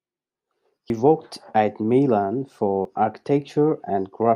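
The recording path likely handles the signal in 2-second chunks and drops a short slice at each handover, which is audio missing between chunks. The speech jumps forward abruptly at 0.90 s, just before "worked at", and again at 2.85 s, roughly two seconds later. Each time about a twentieth of a second of sound is lost, and the two sides are butted together with no gap, so the speech skips slightly ahead rather than pausing.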